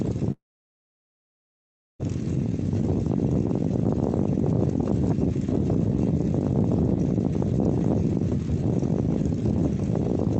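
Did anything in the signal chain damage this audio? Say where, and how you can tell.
Yes. Between 0.31 and 2.01 s the audio drops out for about 1.7 s, most likely a long network dropout. The receiver's concealment smears the last sound into a brief fading buzz, then about 1.6 s of near silence follows before the signal resumes with that stretch missing. On a waveform this is a short decaying tail and then a flat line. On a spectrogram, a blurred smudge gives way to an empty gap, set against the Opus call path's top edge near 8 kHz.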